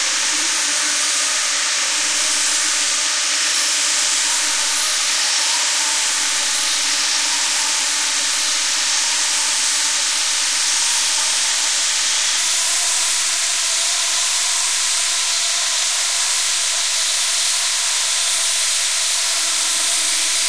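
An everyday-sound recording plays back at the wrong sample rate from 0.0 to 12.37 s. Across that span everything runs slow and sits low. Speed drops to 0.919 times normal. Pitch falls by 1.47 semitones. Both shift together because the samples are clocked out too slowly, with no conversion between rates. The ratio fits 24 kHz material played at 22 kHz.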